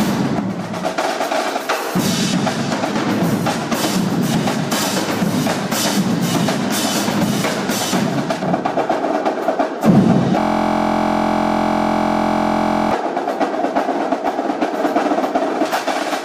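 From 8.43 s to 15.65 s the audio turns dull and muffled. This is de-emphasis applied wrongly. A treble-cut filter meant to reverse pre-emphasis has acted on material that never had it, or has been applied twice. The top end falls away smoothly rather than at a sharp edge. At 10 kHz it sits about 11 dB below the level at 1 kHz. From 10.40 s to 12.91 s there is also a system hang loop. The host or driver stalled while the sound hardware kept replaying one stretch of its ring buffer. That stretch is 23.22 ms long, which fits a 1024-sample buffer. It repeats over a hundred times at 43.1 Hz. So it is heard as a steady buzz, not a stutter. Because this loop sits inside the muffled section, the buzz is dulled too.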